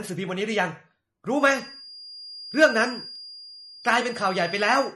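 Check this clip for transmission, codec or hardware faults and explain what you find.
Three faults are present: codec damage throughout, a whistle from 1.33 s onward, and a skip at 3.16 s.

MP3 compression runs through the whole clip, with plainly audible damage that is likely from a low-bitrate encode, around 40 kbps. Short of bits, the encoder cuts the treble at a fixed frequency and drops weak spectral detail frame by frame, leaving the speech dull, watery and swirly.

A feedback whistle starts at 1.33 s and lasts to the end. It is likely a speaker-to-microphone loop held just at the edge of feedback, sustaining a single tone at 4.8 kHz without building up. It sounds like a thin whine at one pitch that swells and fades slowly, about 20 dB below the speech.

A dropped buffer (overrun) occurs at 3.16 s. The software likely failed to read its samples before the hardware overwrote them, so a few milliseconds of audio vanish and the two ends butt together. 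There is no gap, just a small forward jump.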